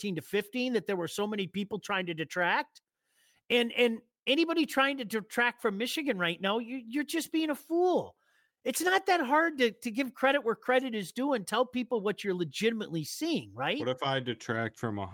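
No technical faults are audible.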